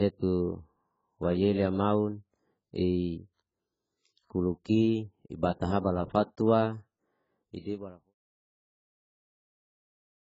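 Speech, and the whole thing has the dull, smeared quality of heavy AAC compression. Nothing gets through above about 7.6 kHz, and the top end that's left has that watery, fizzy texture around sibilants. That's likely AAC-LC at a very low bitrate, something like 12 kbps, dropping high bands and quantising what remains against its hearing model. The clean fade-out, starting around 7 s and finishing at 8.15 s, carries the same smear all the way down.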